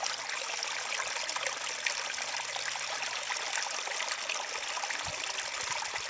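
No technical faults can be heard anywhere in the audio; the signal stays continuous and stable throughout.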